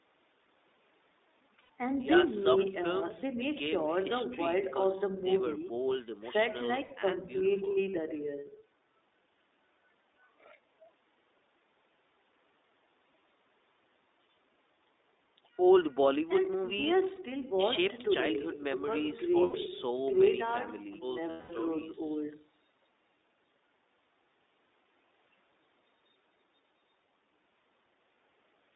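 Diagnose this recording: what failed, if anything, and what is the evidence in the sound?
Speech sounds narrow, slightly rough and synthetic throughout, with nothing above about 3.7 kHz and thin lows below about 250 Hz. This points to the codec stage. iLBC coding each 20 ms frame independently gives this plainly audible damage, consistent with its 15.2 kbps mode.

Brief held, buzzy vowel-like fills replace the speech at 1.62 s (80 ms), 6.84 s (60 ms), 17.16 s (20 ms), 19.44 s (100 ms) and 21.30 s (200 ms, fading). These are lost iLBC frames from the network stage. The decoder repeated the last pitch cycle mixed with noise, and the voice is right again almost at once after each gap.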